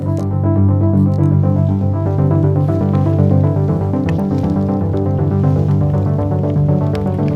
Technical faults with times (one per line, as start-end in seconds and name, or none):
0.00-2.06 channel delay (comb filtering)
5.40 dropped samples